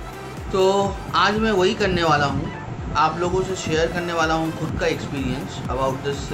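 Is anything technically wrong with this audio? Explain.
No, nothing technically wrong can be heard in this audio, and the signal holds steady and continuous for its whole duration.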